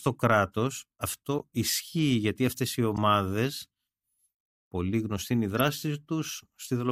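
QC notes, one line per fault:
1.39–1.42 s, 2.97 s, 5.57–5.61 s: corrupt frame decoded. Damaged compressed frames were played anyway, so misread gains and codes drop energy at the wrong frequencies, heard as short glitches near -20 dBFS. On a spectrogram each appears as a brief, frame-width smear unrelated to the speech.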